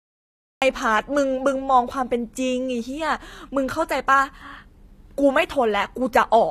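A cut-off start opens the speech recording: digital silence runs from 0.0 to 0.62 s, and then the audio jumps in partway through a sound, with no natural attack or fade-in. Capture or the stream evidently began late, so the onset was simply sliced away and the first sound arrives already in progress, its beginning missing. Throughout the clip there is plainly audible damage that likely comes from HE-AAC compression, consistent with a low bitrate around 24 kbps. That scheme codes only the lower spectrum in detail and synthesises the treble by copying lower bands upward under a coarse envelope. Here the top is present but not genuine: the rebuilt harmonics fail to line up with those below the crossover, s sounds come out gritty, metallic or lispy, and nothing is present above 14.9 kHz.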